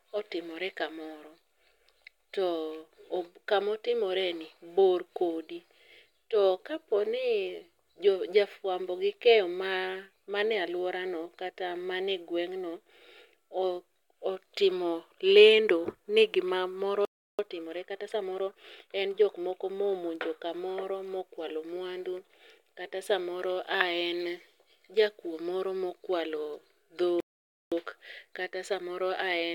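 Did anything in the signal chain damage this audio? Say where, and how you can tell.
Yes. At the playback stage there are two playback stalls. The speech cuts to silence mid-flow from 17.05 to 17.39 s, about 0.34 s, and again from 27.20 to 27.72 s, about 0.51 s. On a waveform these are flat, near-silent gaps with abrupt edges; a spectrogram shows clean vertical blank bands across all frequencies. The likely cause is the player's buffer running dry or its output thread being blocked until data resumed.

Each stall is followed by time-compressed catch-up, also at playback. From 17.39 to 19.63 s the speech runs at about 1.15 times normal speed, and from 27.72 s to the end at about 1.1 times, with pitch unchanged. The player is trimming its backlog by removing short segments and cross-fading the joins. A spectrogram shows syllables and pauses packed closer while harmonic spacing stays the same, with smearing at the splice points.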